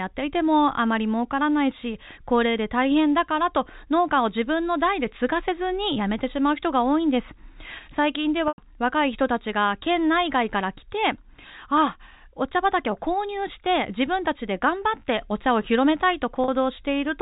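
At 8.48 s and 16.44 s, packet loss with pitch repetition: gaps of 100 ms and 40 ms, bridged by repeating the last pitch period. The first fades into brief silence, and the second sounds like a short, buzzy held tone over the band-limited G.711 telephone sound.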